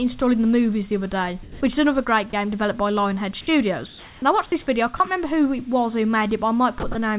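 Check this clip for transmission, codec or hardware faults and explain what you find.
The clip shows voice-detector faults at several points, heard through a narrowband call path with nothing above 4 kHz, consistent with G.711 A-law.

Sound dropped by the voice detector occurs from 1.43 to 1.61 s, and briefly at 4.97 to 5.00 s, 6.80 to 6.83 s and 6.92 to 6.95 s. The likely cause is a sender detector that mistook real sound for background and stopped sending, so the receiver filled the gaps with comfort noise. The first gap loses about 120 ms of sound, and each later one about 30 ms. You hear brief flat hiss where sound should continue. On a waveform the envelope collapses to a uniform low band. On a spectrogram harmonic or transient detail gives way to smooth, even noise.

Comfort noise in place of the background runs from 3.86 to 4.22 s. During this pause the sender likely went into discontinuous transmission, and the receiver synthesised noise roughly matching the background, which sits about 24 dB below the loud parts. 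The substitute is about 1 dB quieter and featureless. The real background's texture turns into steady hiss. A spectrogram shows a smooth, uniform wash lacking the fine structure around it. The waveform stays flat in level.

Onset clipped by the voice detector appears at 4.20 to 4.22 s, where the comfort noise ends. The detector was likely slow to register returning sound, so about 20 ms of the start was never sent. The sound begins abruptly without its soft attack. On a waveform the amplitude jumps from the comfort-noise floor to the sound's level with no ramp. On a spectrogram energy appears suddenly as a hard vertical edge.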